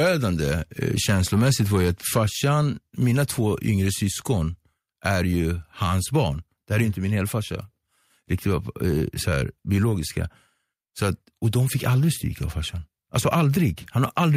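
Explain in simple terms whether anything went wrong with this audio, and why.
Microphone overload runs from the start to about 3.88 s. The loudest moments of the speech sound harsh and crackly because their peaks are flattened. The likely cause is the microphone's input level being set too high, so the tops of those peaks get cut off.

Microphone volume stepped down at 2.18 s. The speech and background suddenly get quieter in a single step. The likely cause is the call software detecting the overloaded microphone and lowering its input level once to tame it.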